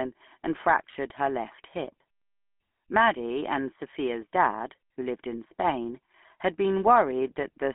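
Speech that sounds buzzy and gravelly from start to finish, squeezed into a narrow telephone band of roughly 200 Hz to 3.4 kHz. This is the GSM full-rate codec: a vocal-tract model excited by sparse, evenly spaced pulses, which fits a 13 kbit/s coder.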